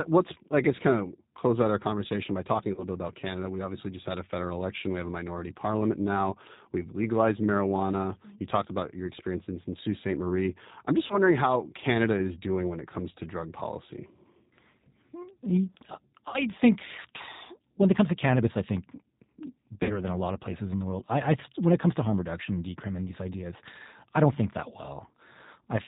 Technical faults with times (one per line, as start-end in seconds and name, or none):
0.00-25.87 G.729 codec
2.74-2.84 VoIP packet loss concealed by the speech codec
11.07-11.18 VoIP packet loss concealed by the speech codec
16.28-16.43 VoIP packet loss concealed by the speech codec
19.83-20.00 VoIP packet loss concealed by the speech codec